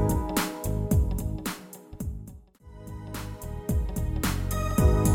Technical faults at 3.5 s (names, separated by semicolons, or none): none